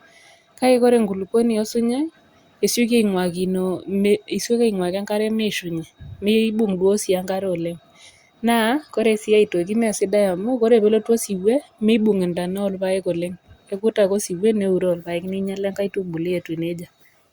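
No technical faults are audible anywhere in this speech recording.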